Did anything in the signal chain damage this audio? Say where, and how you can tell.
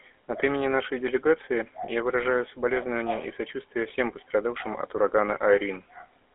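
Yes: GSM full-rate codec damage runs throughout, at the codec stage. Buzzy, gravelly speech, nothing above 3.8 kHz, and a 300 Hz to 3.5 kHz band point to pulse-excited vocal-tract coding at about 13 kbit/s.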